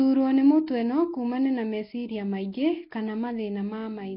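Throughout the speech there is heavy Nellymoser compression damage: a rough, hissy halo, an underwater smearing, and nothing above 5.3 kHz. The sound fits the old Flash codec at around 22 kbps, likely starving weak bands of bits and filling them with noise.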